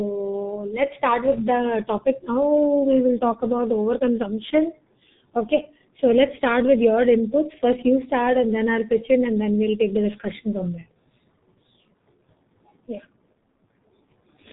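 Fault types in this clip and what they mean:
G.723.1 codec: The speech passed through a very low-bitrate telephony codec that models the voice in long frames and updates that model slowly. Nothing above about 3.8 kHz survives, so it sounds muffled and hoarse with smeared consonants, heavy damage that fits roughly 6 kbit/s.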